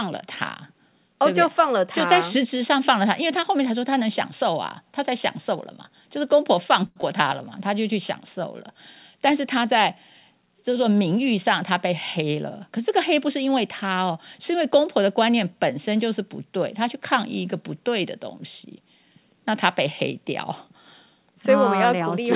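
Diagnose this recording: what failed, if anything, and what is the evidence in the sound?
A short stall from a late packet at 6.86 to 6.98 s. The jitter buffer ran dry, so the last sound is held for 96 ms until the packet arrives.

Right after, at 7.02 to 7.05 s, there's a skip ahead. Something like 70 ms of audio was dropped, in transit or by the buffer, and playback jumps forward with almost no join.

From 11.70 to 13.57 s there's a jitter buffer speed-up. The receiver trims pitch periods to cut delay, running 5% fast with about a tenth of a second removed, at unchanged pitch.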